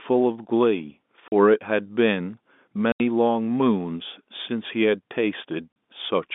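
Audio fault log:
1.28–1.32 s, 2.92–3.00 s, 5.72–5.76 s: packet loss filled with silence. Gaps of 40, 80 and 40 ms, which fits lost 20 ms packets, chop the speech with hard edges. On the waveform they show as flat, near-silent stretches, and on the spectrogram as blank vertical strips.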